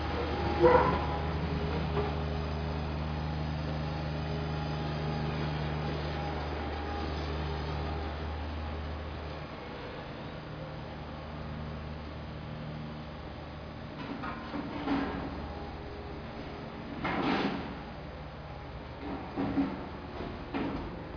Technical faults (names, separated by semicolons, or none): none